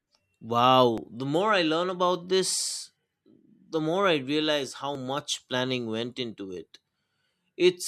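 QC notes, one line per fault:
0.98, 2.96, 4.95, 6.94 s: audio missing between chunks. Likely a chunked recorder dropping about 10 ms at each handover; the joined edges give brief skips every 2 s.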